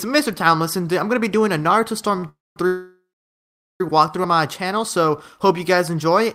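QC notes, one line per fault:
2.19 to 2.24 s, short stall from a late packet: the last sound is held about 33 ms too long and then picks up exactly where it left off, with nothing lost. A packet turned up late, the jitter buffer ran dry, and the receiver stretched what it had until the packet arrived. Everything after lands 33 ms later.
2.29 to 2.57 s and 2.67 to 3.81 s, call audio freeze: the sound carries on past its natural point, then drops out. The first is 272 ms long with about 210 ms of silence, and the second is 1.13 s with about 770 ms of silence. Playback then resumes where it stopped, with nothing missing. The likely cause is packets held up in transit, emptying the jitter buffer so the receiver extended the last sound until it faded out. Together with the stall, the audio ends up roughly 1.4 s behind.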